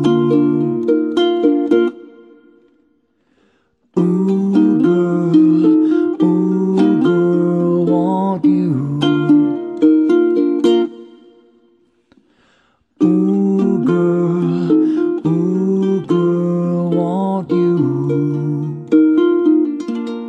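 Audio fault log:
No faults heard anywhere in this audio.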